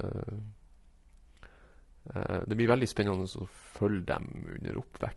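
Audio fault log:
Throughout, low-delay AAC compression: the speech carries plainly audible coding damage, with a rough, grainy texture where the harmonic structure of the voice should be clean. The likely cause is an AAC-ELD encoder of the kind used for video calls, which at a low bitrate has too few bits to keep noise out of the gaps between the voice's harmonics. The degree of damage fits a bitrate of about 32 kbps.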